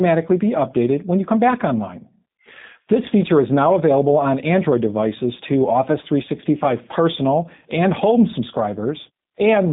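From start to finish the speech runs through G.729A coding, and you can plainly hear it. Nothing gets above about 3.7 kHz or below 150 Hz, and the rebuilt voice has that rough, slightly synthetic edge that fits the 8 kbit/s rate.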